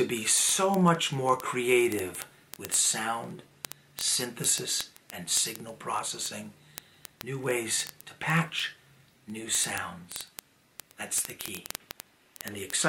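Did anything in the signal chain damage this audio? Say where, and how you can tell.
Yes. The damage happens at a digital interconnect, where a receiving device runs on its own clock and is not locked to the sender's word clock. The two clocks differ by roughly 1000 ppm, so they slip past each other about every 20 ms. At each slip a few samples are misread and one sample is dropped or repeated. From 0.11 s to the end, this produces word clock ticks of uneven strength, hundreds of them, arriving so fast they merge into a steady rattle or buzz.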